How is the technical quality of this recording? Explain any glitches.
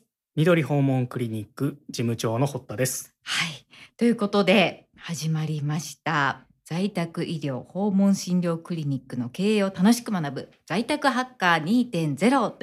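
Nothing in the recording registers as a technical fault, so there are no glitches to explain.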